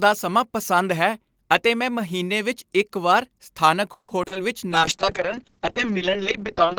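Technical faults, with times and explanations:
3.93–4.37 s: repeated packet loss (robotic sound). Four gaps, longest 150 ms, half the stretch concealed by extending earlier sound. Speech turns choppy.
4.38–4.80 s: jitter buffer slow-down. The receiver repeated small pieces to rebuild its reserve, adding 38 ms. Speech plays at 92% speed, same pitch, drawn out.
4.72–6.79 s: call bitrate drop. Bitrate fell from 32 to 6 kbps, bandwidth from 20 kHz to 8 kHz. Speech sounds muffled and coarse to the end.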